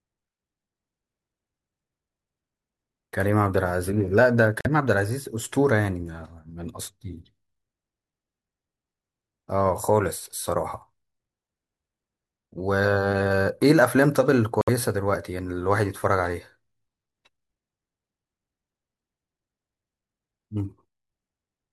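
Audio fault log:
4.61 to 4.67 s and 14.61 to 14.69 s, Bluetooth dropout: packets on the wireless link likely arrived too late at the headphones and were discarded, so playback fell silent until fresh packets came through. Each gap opens and closes abruptly or with a fade of a few milliseconds, and the speech picks up further along rather than where it broke off, as though it had kept playing. The first hole skips about 43 ms of audio and the second about 64 ms, which fits roughly two and then three lost frames.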